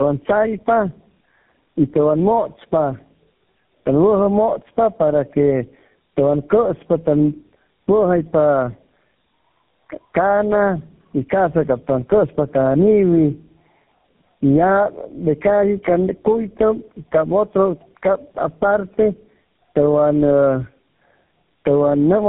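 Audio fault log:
throughout, gain pumping: the level ducks by roughly 10 dB under loud speech and loud and soft parts sit closer together, likely a fast limiter fighting mic gain set too hot.
throughout, tandem speech coding: rough, warbly and muffled, nothing above 3.8 kHz; sounds like three speech codecs stacked, each re-coding the last one's damage, ending on GSM full rate.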